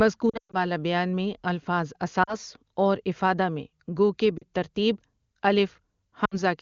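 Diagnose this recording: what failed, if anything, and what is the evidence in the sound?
Lost AMR speech frames at the network stage, heard at 0.29–0.57 s, 2.23–2.36 s, 4.37–4.44 s just after "إِفَادَە میں گو کہ", and 6.25–6.40 s. Frames failing their checksum were concealed by reusing the last pitch and vocal-tract settings with falling gain. The 120 ms run near 0.3 s drops to near silence within two frames.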